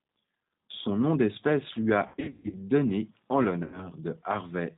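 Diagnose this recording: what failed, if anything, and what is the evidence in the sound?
Codec stage: the speech is band-limited to 4 kHz throughout with a rough, synthetic grain, pointing to the G.729 codec at 8 kbit/s rather than simple low-pass filtering.

Network stage: VoIP packet loss concealed by the speech codec, from 2.08 to 2.55 s after "nom d'espèce lui" (about 300 ms lost, longest run 140 ms) and from 3.64 to 3.89 s. The decoder stretches the last sound into a fading buzzy tone or coloured noise instead of leaving silent gaps.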